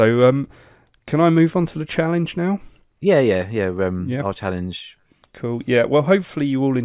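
No technical faults can be heard anywhere in this recording.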